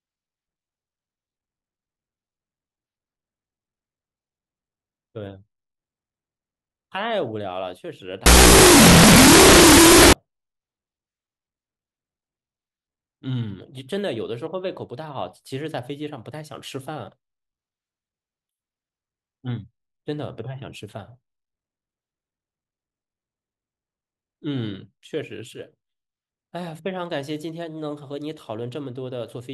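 It's a speech recording, and from 8.26 to 10.13 s it collapses into loud hiss with the talker buried underneath, running at half speed and an octave low. That's a wrong sample width fault, which fits 16-bit samples being read back as unsigned 8-bit bytes.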